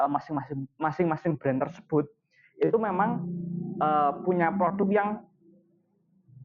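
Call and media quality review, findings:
Noise suppressor applied to music or sounds, whole clip. Speech-tuned suppressor left in the path, treating steady tones, ambience and reverb as noise. Gain swings around 20 dB; onsets pass while held sound and decay tails are pulled down, so level and texture fluctuate.

Sound cut by the noise suppressor, 1.7–2.6 s and 5.2 s to end. The suppressor classifies this sound as noise and attenuates it beyond the rest, deepest drop about 21 dB. In the first span roughly 0.7 s is affected.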